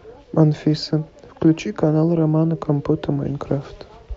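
No technical faults can be heard in this recording.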